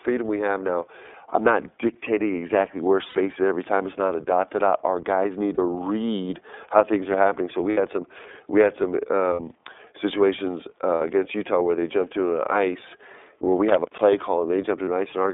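Speech that sounds thin, boxed-in and slightly rough and synthetic throughout, limited to a band of about 250 Hz to 3.6 kHz. This is the iLBC codec: a narrowband VoIP coder that encodes each frame's excitation independently, which fits its 13.33 kbps, 30 ms-frame mode, and the coding damage is plainly audible. Six brief held, buzzy vowel-like smears interrupt the speech at 3.09–3.15 s, 5.54–5.59 s (between "guys need" and "read how things are"), 7.70–7.78 s (just before "some we had some"), 9.33–9.40 s (just after "some we had some"), 10.95–11.02 s and 14.85–14.88 s. These are lost iLBC frames, each gap 30 or 60 ms long. The decoder fills each gap by repeating the last pitch cycle mixed with noise, and clean speech resumes immediately afterward. From 13.69 to 14.02 s an irregular burst of crackling and scratching cuts in. This is loose connector crackle, where a worn or dirty contact rapidly makes and breaks, chopping the signal.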